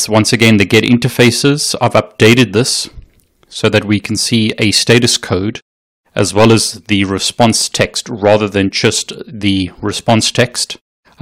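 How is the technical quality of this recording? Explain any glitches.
The technical quality is compromised by hard clipping that runs through the whole recording. The speech was driven about 13 dB past what the signal chain could pass, so every peak above full scale was sliced flat. Only a small share of samples, around 2 percent, sit at that ceiling, but they land on the loudest moments, so stressed syllables carry a gritty crackle. The waveform shows squared-off tops pinned at the limit. A spectrogram shows vertical smears of high-frequency harmonics at each clipped peak.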